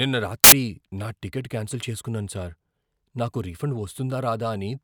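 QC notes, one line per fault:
0.44–0.52 s, samples built from the wrong bytes: for about 80 ms the speech gives way to a burst of loud, harsh broadband noise, ending just before "నా టికెట్ క్యాన్సిల్ చేసుకున్నాను". Here the bytes of each sample were assembled out of order or misaligned, so the rapidly fluctuating low-order bits landed in the most significant position. The result is effectively random large values, which is why it sounds like broadband hiss rather than distorted speech.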